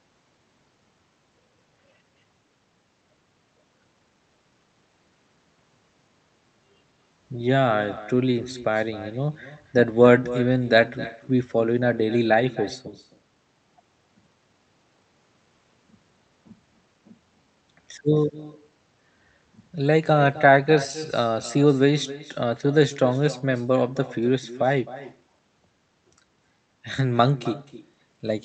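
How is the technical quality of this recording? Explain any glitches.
The recording has one persistent fault: an echo with no canceller, audible from start to finish across the speech. The audio also has the narrowed top end of a call codec, with content stopping around 8 kHz, which fits Opus at a modest bitrate.

Throughout the clip, every phrase is followed roughly a third of a second later by a faint, thin copy of itself, sitting about 17 dB below the direct speech. The far end is playing the call through a loudspeaker, its microphone is capturing that playback, and no echo canceller is subtracting it. So the talker's own voice returns after the network round trip, adding a trailing shadow.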